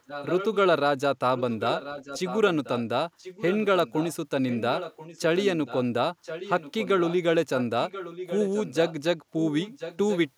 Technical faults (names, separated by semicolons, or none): echo leak